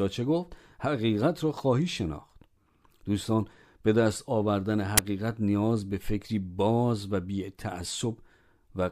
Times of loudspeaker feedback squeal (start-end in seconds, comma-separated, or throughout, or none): none